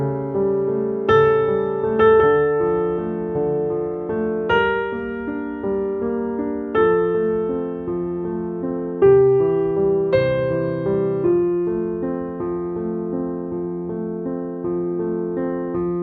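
Nothing in the audio points to a technical fault at any point, so there are no times or causes to report.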